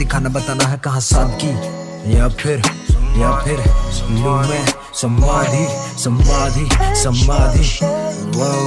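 No technical faults can be heard anywhere in the recording. The audio runs continuously, with no breaks, dropouts or sudden changes in level.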